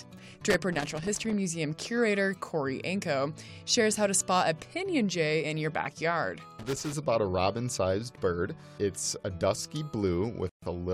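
Irregular bursts of crackle and scratching break into the audio from 0.50 to 1.33 s and again from 6.59 to 6.93 s. This is loose connector crackle: a worn or dirty contact repeatedly makes and breaks as it shifts, chopping the signal into fragments. Near the end, at 10.49 s, the sound drops to complete silence for 131 ms and resumes at 10.62 s. That gap is likely a Bluetooth stall, where interference delayed packets long enough for the headphones' buffer to empty and playback to pause until the resent data arrived.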